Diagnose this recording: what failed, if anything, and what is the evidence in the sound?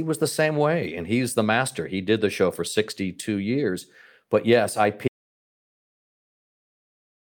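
The recording suffers an audio dropout to silence at the capture or input stage. Just after "yes I", at 5.08 s, the speech stops mid-phrase and the track falls to silence that runs to the end, with no room tone or noise floor remaining. The waveform flattens to a near-flat line, and the spectrogram goes uniformly black from that point. The input was likely lost through a disconnected device or failed link while the recorder kept writing silence.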